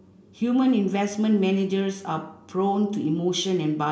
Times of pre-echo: none

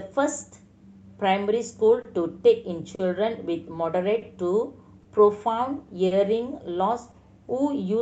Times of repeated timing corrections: 0.68-2.65

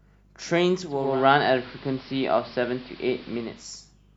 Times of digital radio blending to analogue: 0.83-3.81

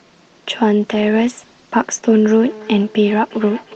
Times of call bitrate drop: 0.88-2.09

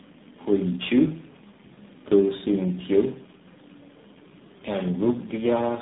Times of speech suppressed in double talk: none

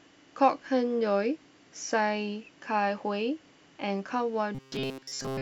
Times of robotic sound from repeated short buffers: 4.55-5.42

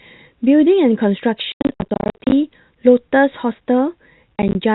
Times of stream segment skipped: none

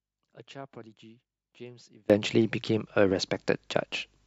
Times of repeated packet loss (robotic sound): none

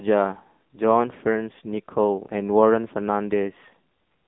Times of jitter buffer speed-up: none

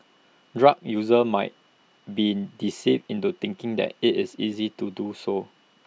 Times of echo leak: none

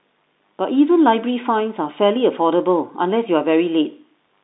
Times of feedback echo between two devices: none

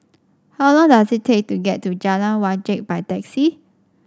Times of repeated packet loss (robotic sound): none

